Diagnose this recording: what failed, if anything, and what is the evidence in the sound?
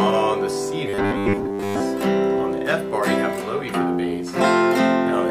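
From 0.87 to 1.80 s the sound turns into a rigid, metallic buzz fixed at 100 Hz, loosely tracking the original contour but with most of the real audio missing. This is robotic sound from repeated short buffers, likely at the driver or buffer stage: audio arrived too seldom, so the same short chunk was replayed to fill the gaps. A 100 Hz buzz fits a repeated segment about 10 ms long.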